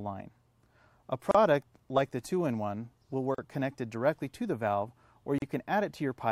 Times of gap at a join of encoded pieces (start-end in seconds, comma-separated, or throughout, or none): 1.31-1.35, 3.35-3.38, 5.38-5.42